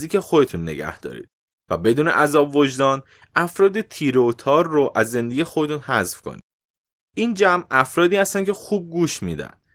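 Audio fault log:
Nothing stood out on listening to this speech clip.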